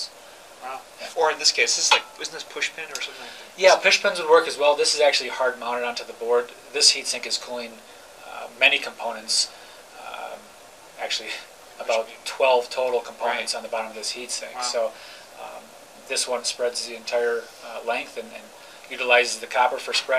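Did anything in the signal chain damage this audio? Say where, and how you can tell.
No, the signal chain shows no damage anywhere.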